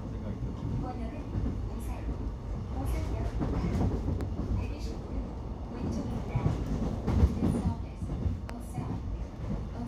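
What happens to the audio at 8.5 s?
A single loud pop lands from 8.49 to 8.52 s, peaking roughly 10 dB above the surrounding sound, which continues underneath. It is likely a sudden voltage step, such as a switch or plug transient or static, which the following circuitry shapes into a short burst. On a waveform it shows as one tall, narrow spike. On a spectrogram it is a thin vertical stripe spanning all frequencies at that instant.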